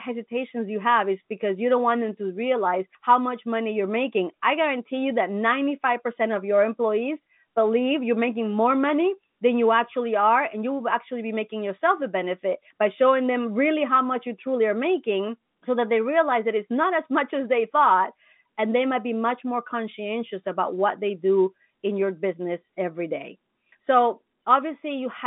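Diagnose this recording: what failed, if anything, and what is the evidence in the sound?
Nothing has failed here; the speech simply sounds like an ordinary phone call, with the G.711 telephone coding doing its usual job of keeping everything inside the telephone band and letting nothing through above 3.8 kHz.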